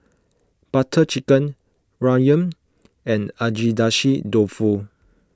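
Nothing technically wrong turns up in this short bit of speech; there are no faults to point to.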